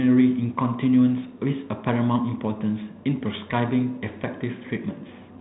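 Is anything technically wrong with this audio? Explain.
No, the speech is carried by G.726 ADPCM at 32 kbit/s, which limits it to the band below 4 kHz and adds only light coding noise, exactly as that codec is designed to do.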